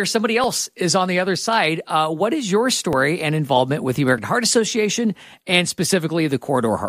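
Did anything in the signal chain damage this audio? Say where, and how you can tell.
Yes. There are two jumps in the sound, at 2.93 s and 4.18 s. Each one skips ahead with no gap of silence, losing roughly 20 ms and 30 ms of audio respectively. This points to the driver or buffer stage, and the likely cause is a dropped buffer (overrun): the capture software fell behind, the hardware overwrote the waiting samples, and the audio on either side of the lost block was joined directly.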